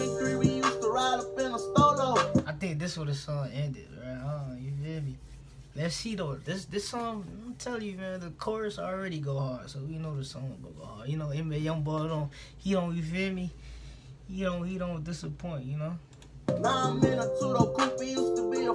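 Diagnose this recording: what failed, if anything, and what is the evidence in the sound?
No fault at any stage.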